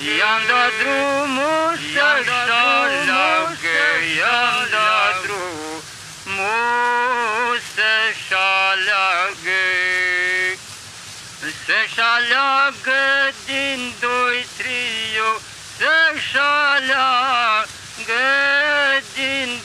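From the opening until 5.34 s the audio is heard twice: a second, full-band copy trails about two seconds behind, around 5 dB quieter, with no decay or room colour, then cuts off abruptly. This doubled audio track likely comes from the same signal being captured again through a slower path.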